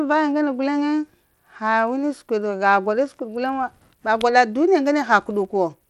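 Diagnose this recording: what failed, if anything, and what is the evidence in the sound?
The codec stage failed, most likely through Bluetooth SBC compression. A gritty noise rides on the speech throughout, and the treble flickers. Nothing is heard above 19.3 kHz. The damage fits a bitrate near 96 kbps, where coarse sub-band quantisation starves the top bands.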